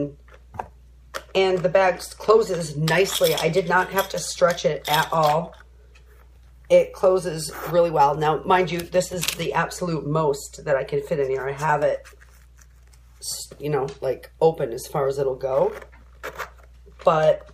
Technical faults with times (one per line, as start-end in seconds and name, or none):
0.00-17.54 mains hum